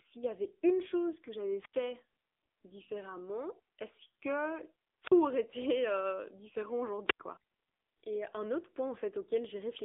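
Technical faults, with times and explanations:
Throughout, AMR narrowband mobile codec: the speech is confined to a telephone band of roughly 300 Hz to 3.6 kHz, with nothing above 3.7 kHz, and sounds plainly buzzy and synthetic. The codec rebuilds the voice from a vocal-tract model excited by sparse pulses, and at a rate consistent with 7.95 kbps that model loses natural texture.
1.61–1.73 s, 5.02–5.12 s and 7.08–7.20 s, wireless microphone squelch dropout: each time the sound drops into a short hole of near silence, about 81 ms after "une chose que j'avais", 43 ms in the middle event, and 94 ms after "été euh différent". The FM radio link faded, so the receiver's squelch muted its output until the signal recovered.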